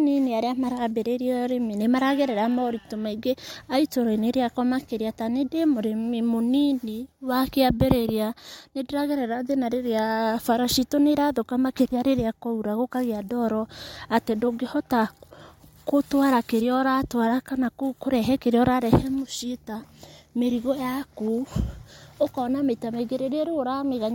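No technical fault can be heard anywhere in the speech; the signal path carries it without any audible defect.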